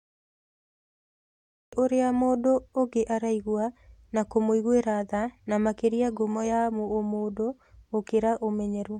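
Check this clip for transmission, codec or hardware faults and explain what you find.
One fault is present, a cut-off start. From 0 to 1.73 s there is digital silence, then speech begins abruptly mid-sound at "ũrĩa mũndũ ũngĩ araigua" with no natural attack, because the recording or stream began late.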